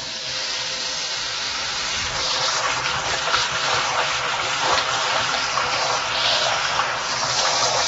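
Throughout, nothing remains above 7.6 kHz, and the sound is dull with a smeared, fizzy texture. This is likely AAC compression at a low bitrate, around 24 kbps.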